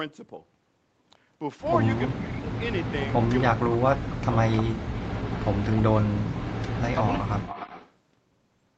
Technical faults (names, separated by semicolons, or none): speech suppressed in double talk; echo leak